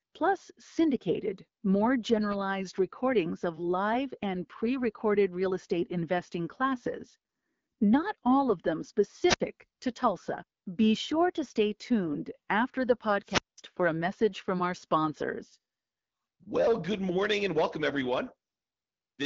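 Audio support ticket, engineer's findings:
Wireless mic squelch dropout, 9.26–9.40 s, right after "not all of them". Short burst of hiss, then about 60 ms of dead air before the audio comes back. RF fade on the analogue FM link dropped below the receiver's squelch threshold, so the receiver muted.

Same squelch dropout, 13.23–13.58 s, between "stay tuned after the" and "for a message from". Longer one: static swell, then a 0.2 s mute. Check the RF path and antenna placement. The codec path sounds like AMR-WB at 12.65 kbit/s, with light coding artefacts.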